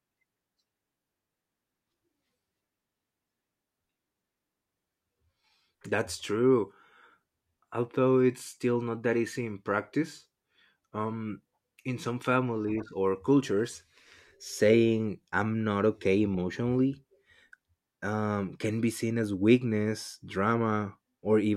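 Nothing goes wrong anywhere in this bit of speech, so there's no technical fault to point to at any moment.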